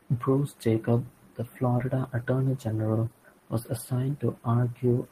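At 1.78 s and again from 3.63 to 3.66 s, short concealed packet loss briefly smears the speech. The receiver filled roughly 10 ms and 20 ms gaps by extending the preceding sound.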